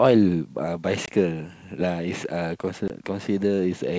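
At 1.06 to 1.09 s and again at 2.88 to 2.90 s, packet loss on an ADPCM call cuts about 20 ms of the speech, roughly a single packet each time, and fills the gap with silence. On a waveform these are flat, hard-edged holes; a spectrogram shows a thin blank vertical stripe across the G.722 wideband coding's full band. Because the decoder's adaptive predictor and step size lose track of the sender's, the speech returns slightly distorted before settling.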